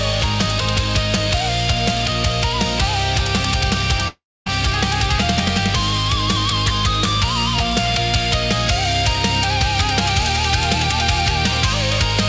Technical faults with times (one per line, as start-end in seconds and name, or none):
4.08-4.48 long network dropout